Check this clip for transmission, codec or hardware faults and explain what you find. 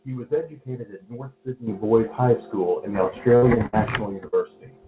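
Yes, there are transmission faults: three bursts of lost packets and one shorter concealed loss, all in the second half of the speech. The audio also stops at 4 kHz, consistent with a narrowband call codec such as G.711 A-law.

A burst of packet loss occurs at 3.36–3.44 s (after "and the"), 3.66–3.75 s and 4.28–4.34 s. Each time, the receiver stretched the last sound into a fading buzz or hiss for about 50–65 ms, and roughly 40–60 ms of speech was skipped.

A short concealed packet loss at 3.54–3.58 s, again after "and the", was patched by extending the preceding sound for about 20 ms, leaving a brief smear or wobble.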